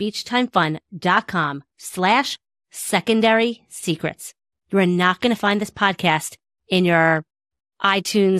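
Throughout the speech, the top end sounds dull and a granular, gurgling roughness rides on the voice, most likely from MP2 compression at a rate that fits about 80 kbps. Starved sub-bands flicker on and off rather than leaving a clean, fixed cut-off.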